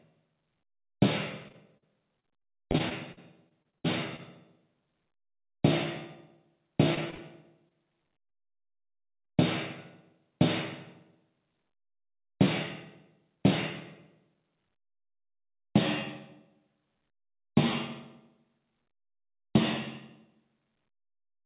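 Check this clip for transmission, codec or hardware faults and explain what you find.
Two stretches of repeated packet loss (robotic sound) stand out, heard over a narrow call-codec path that carries nothing above 4 kHz.

From 1.48 to 4.20 s and again from 6.94 to 8.32 s, repeated packet loss turns the sound choppy, with pieces missing. Each lost chunk, up to about 56 ms, is patched by stretching the preceding sound. Unlike a single dropout, these closely spaced gaps recur throughout each stretch.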